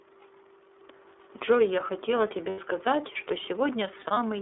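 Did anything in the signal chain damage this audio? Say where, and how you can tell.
Yes. The damage sits at the codec stage, across the whole clip: this is the iLBC codec. Nothing passes below about 300 Hz or above 3.6 kHz, and the speech has a rough, slightly synthetic edge throughout. The rate of about 13.33 kbps fits iLBC's 30 ms frame mode. It differs from a plain telephone-band filter because that would only dull the sound. Here the excitation itself is coarsely coded, which gives the buzzy, granular texture.

The second fault is lost iLBC frames, damaged on the network. From 2.49 to 2.59 s there is a 90 ms gap, and from 4.01 to 4.19 s the losses come in short bursts spread over about 210 ms, none much longer than a single frame. The decoder fills each gap by repeating the last pitch cycle with added noise, so it sounds like a held, buzzy vowel rather than silence or a click. That rules out a buffer underrun. 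The sound is correct again immediately after each gap because each frame decodes independently.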